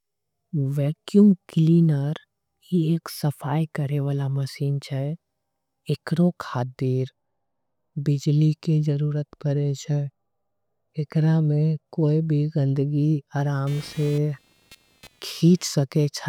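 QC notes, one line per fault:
13.67 to 15.68 s, computer activity noise: a buzzing, chirpy layer rises under the speech, pulsing at around 200 times a second and sitting roughly 25 dB below it. Shifting processor or graphics load disturbs the ground shared with the audio circuit, so the buzz follows the machine's activity rather than the speech. On a spectrogram it shows as a dense comb of evenly spaced vertical striations; the waveform carries a low, fuzzy pulse train between syllables.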